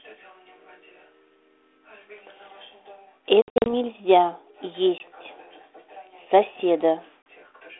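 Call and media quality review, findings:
Packet loss on an ADPCM call: hard-edged dropouts at 3.42–3.67 s (about 180 ms lost in short gaps, longest 60 ms), 4.98 s and 7.23 s. Speech resumes with brief slight distortion while the decoder's predictor and step size resync. The band-limited line sound fits 32 kbit/s G.726.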